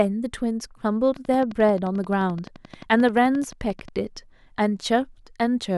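From 1.16 s to 3.89 s a train of clicks runs through the speech: around thirty near-identical pulses at a regular 11.4 per second, peaking roughly as loud as the speech itself. The likely cause is interference from nearby equipment or a faulty connection or power supply.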